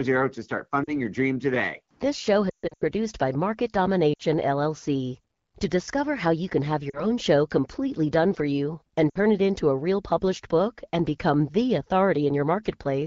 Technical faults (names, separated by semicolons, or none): lost AMR speech frames